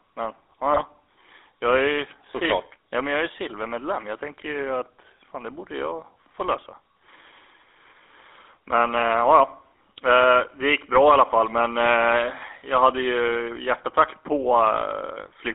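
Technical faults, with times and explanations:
Throughout: GSM full-rate codec, buzzy, gravelly speech from pulse-driven vocal-tract modelling, consistent with 13 kbps; the spectrogram shows energy confined to 300 Hz–3.6 kHz.
0.72–0.81 s: GSM bit errors, a brief squawk as corrupted filter, pitch or gain values distort a few frames.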